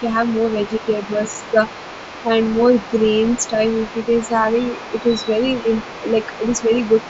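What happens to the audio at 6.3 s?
At 6.3 s the echo canceller is likely failing to fully remove the loudspeaker signal from the microphone, so the other side's voice leaking through is audible from 4.49 s to 7.09 s. It sits faintly beneath the speech, roughly 20 dB down.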